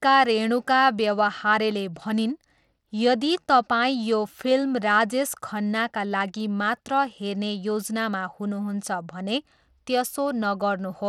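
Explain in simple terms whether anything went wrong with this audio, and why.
Something did go wrong, from start to finish. The speech has a gritty, grainy edge, and the brightest sounds flicker or thin out. Nothing reaches above 17.1 kHz. The likely cause is Bluetooth SBC compression squeezing the audio too hard, starving the treble of detail.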